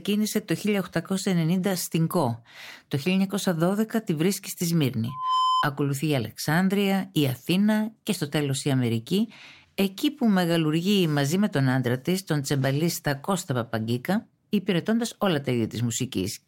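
Just after "τη βρίσκει στη", from 5.08 to 5.66 s, loudspeaker feedback squeal appears: a 1 kHz tone swells over roughly a third of a second to a few decibels above the speech. The microphone is re-amplifying its own loudspeaker output, and loop gain exceeded unity at that frequency.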